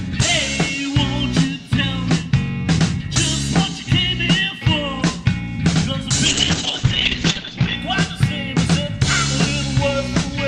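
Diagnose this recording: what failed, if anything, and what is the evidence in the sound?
A call bitrate drop, on the call side: from 6.27 to 7.81 s the top end collapses from 20 kHz to 8 kHz and the sound turns coarse and muffled before clearing. The bandwidth estimate fell, so Opus was squeezed, apparently to around 8 kbps.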